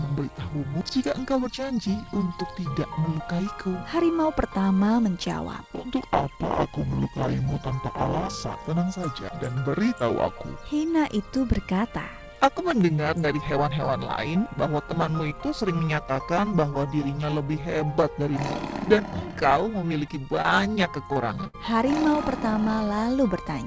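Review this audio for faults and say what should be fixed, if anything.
Short concealed packet loss occurs three times, at 20.42 to 20.46 s, 21.13 to 21.18 s and 21.44 to 21.47 s. Each time about 20 ms of audio failed to reach the decoder in time. The receiver covered the hole for roughly 15 to 26 ms by extending the preceding sound, then cross-faded back into the real signal. The result is a brief smear or wobble.

A burst of packet loss follows immediately, from 21.47 to 21.55 s, running on from the third short loss. Here about 60 ms in a row went missing. The concealment carried the last sound forward for about 62 ms while turning it down, so it comes across as a held, fading buzz or hiss. The audio then picks up again with that stretch gone, and the dropouts cluster near the end of the clip.

The audio passed through a G.722 call path, and nothing above 8 kHz is present.

To prevent both faults, improve the network path's stability, or enlarge the jitter buffer and add forward error correction or redundancy so that late or lost packets can be recovered instead of concealed.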